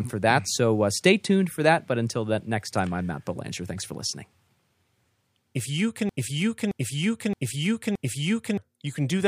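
From 6.09 to 8.58 s the speech sticks, one 0.62 s fragment repeating four times: a broken-record loop, likely a stalled player resending its last fragment.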